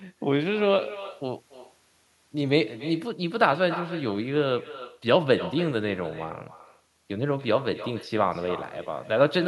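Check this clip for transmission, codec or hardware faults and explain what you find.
One fault runs through the whole clip: echo with no canceller. Every phrase of speech is trailed about 16 dB lower by a thin copy roughly a third of a second later. The far end's loudspeaker feeds its microphone, and with nothing cancelling it, the sound returns across the network.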